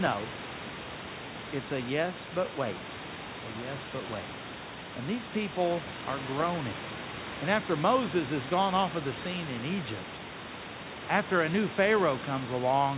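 Nothing's technically wrong with this speech clip: the room's background noise sits about 13 dB under the talking, and the audio tops out at 4 kHz, which is just what you'd expect from a narrowband phone-style call codec like G.711.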